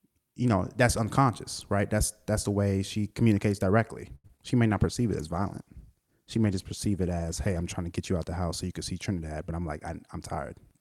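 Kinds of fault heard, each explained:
Short stall from a late packet: at 4.15 s, after "way she communicates directly", a packet arrived late, so the last sound was stretched for about 90 ms, then resumed intact.
Short concealed packet loss: at 4.27 s and 4.37 s, roughly 10 ms each went missing and was filled by extending the preceding sound, leaving brief smears.
Call bitrate drop: from 4.69 s to 7.70 s the encoder fell from 64 to 20 kbps, holding the low rate nearly three seconds, so the speech turns coarse and muffled.
Jitter buffer speed-up: from 9.39 s to 10.19 s, after "so you can see", short pitch-period slices were cut, about 70 ms in total, running speech 6% faster.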